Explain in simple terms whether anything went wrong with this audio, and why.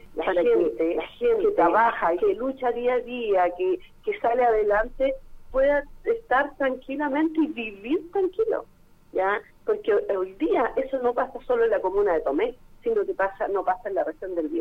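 From the very start until 2.34 s, there is a doubled audio track: everything is heard twice, with a second copy just as loud and about 0.7 seconds behind. The cause is likely a duplicate recording path or a misaligned edit. Unlike a room echo, the copy doesn't fade or sound roomy; it simply cuts off abruptly.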